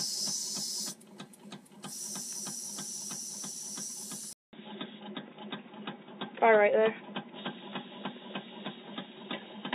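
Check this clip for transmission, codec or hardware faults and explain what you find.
One fault is present. From 4.33 s to the end, after a 200 ms silence, the sound turns dull, with nothing above 3.8 kHz, a level shift of about 5 dB and new background noise about 50 dB below the signal. The likely cause is the input switched to a poorer device, another microphone or a headset call profile, with a narrower band and its own noise.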